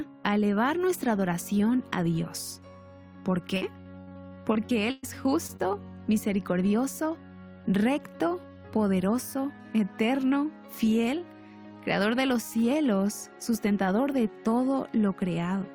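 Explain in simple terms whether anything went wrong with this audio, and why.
Between 3.57 and 5.05 s there is repeated packet loss (robotic sound). Twelve pieces went missing, the longest about 0.12 s. Each was patched by stretching earlier sound, so it turns choppy and robotic.

Right after, at 5.47 to 5.51 s and 5.57 to 5.62 s, comes short concealed packet loss. About 0.02 s was lost each time. The patch leaves a tiny smear or wobble.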